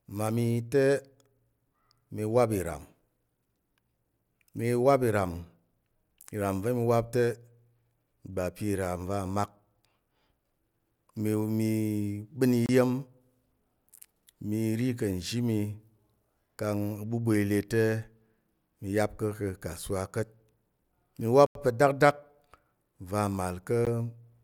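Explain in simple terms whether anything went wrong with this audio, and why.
Three times, the speech drops out to silence and then carries on. The gaps are at 12.66 to 12.69 s, at 21.46 to 21.55 s just before "pa̱ dakdak", and at 23.85 s. They last 28 ms, 89 ms and 17 ms. This is a Bluetooth stall. The likely cause is radio interference delaying the wireless data. The headphones ran out of stored sound and paused until the missing data arrived.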